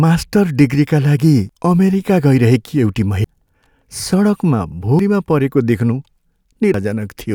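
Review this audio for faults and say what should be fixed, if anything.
Skips at 1.49, 3.24, 4.99 and 6.74 s each cut about a third of a second of speech. This is likely audio missing between chunks, lost at each 2-second chunk handover.

Keep capturing into a continuous buffer while one chunk closes and the next opens.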